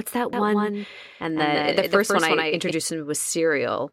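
From 0.33 s to 2.71 s the speech carries a doubled audio track: a second full-band copy trails about 150 ms behind, roughly 5 dB quieter. It is likely the same signal captured again by a slower path or two out-of-step copies left by an edit. Unlike echo or reverb, the copy has no decay or room colour and cuts in and out abruptly.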